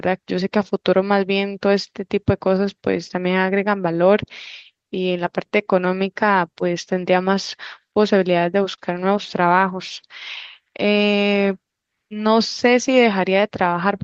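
Clock drift between sender and receiver runs through the whole clip. The sender's clock seems about 4 percent slow, so the receiver's buffer keeps draining rather than overflowing, unlike a single network glitch. This produces repeated timing corrections from 0.10 s to 13.69 s. The receiver stretches short pieces, playing the speech at 97% speed and adding roughly 0.4 s in total. It sounds like an unevenly dragging tempo with faint hiccups rather than audible gaps. At 8.74 to 8.80 s there is a short stall from a late packet. The last sound is held for 34 ms with a slight buzz or dip, and nothing is lost afterwards. That one isolated hold sets it apart from the steady drift corrections. Throughout, the call codec's coding noise and a top end cut near 8 kHz can be heard.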